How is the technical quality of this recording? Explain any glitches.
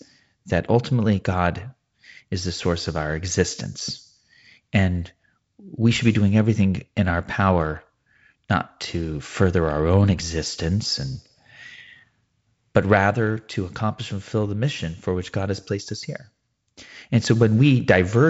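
No glitches; nothing goes wrong.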